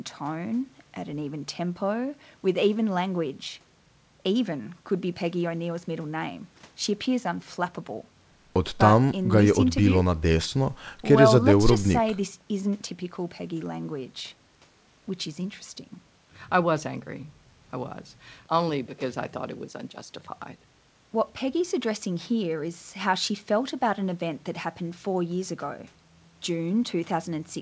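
No technical faults can be heard anywhere in this speech. It has gone over a WebRTC call path, and nothing reaches above 8 kHz, which fits a wideband call codec such as G.722.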